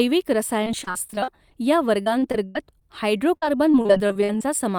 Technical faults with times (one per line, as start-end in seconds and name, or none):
0.64-1.52 repeated packet loss (robotic sound)
2.02-2.82 repeated packet loss (robotic sound)
3.37-4.41 repeated packet loss (robotic sound)